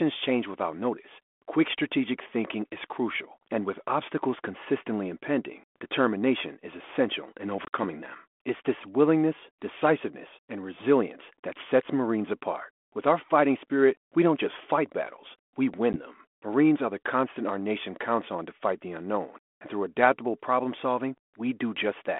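Speech over a G.726 ADPCM line at 32 kbit/s, band-limited to 250 Hz–3.4 kHz, shows packet loss on an ADPCM call. At 7.65–7.70 s, hard-edged silent holes totalling 70 ms appear, the longest 50 ms. At 15.93–15.99 s there is a single 10 ms hole. After each gap, the decoder's adaptive predictor and step size no longer match the sender's, so the speech returns slightly distorted before settling.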